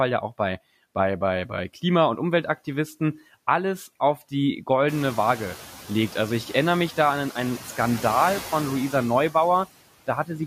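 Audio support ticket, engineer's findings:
Noise suppressor artifacts, throughout. Background pumps, dropping in pauses and returning under speech. Probable component: noise suppressor applying per-band, per-frame gain, cutting noise by about 15 dB. Room noise steps up about 16 dB around 5 s, staying roughly 18 dB below speech.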